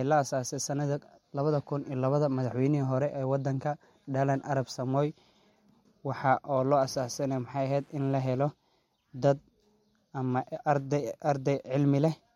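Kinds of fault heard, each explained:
Wi-Fi interference: From 6.49 to 8.49 s a steady ticking runs underneath the speech, repeating about ten times a second at a spacing of 102.4 ms, sitting well below the talker at roughly 40 dB down. That regular tick is the beacon of a nearby Wi-Fi radio. The audio circuit picks up its pulsed radio energy and rectifies it into audible clicks, which stop when the interference ends two seconds later.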